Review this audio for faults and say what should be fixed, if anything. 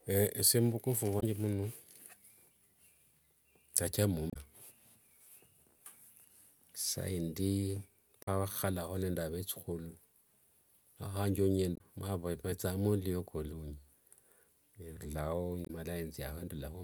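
Damaged data in the compressed stream causes brief glitches at 1.16–1.23, 4.27–4.36, 8.22–8.29, 11.74–11.81 and 15.63–15.70 s. Corrupted bytes make the decoder misread frames and lose sync, leaving roughly 70–90 ms disruptions. These appear as short vertical disruptions on a spectrogram. Fix it by re-fetching the file from an intact source and verifying it with checksums or a transport with error detection.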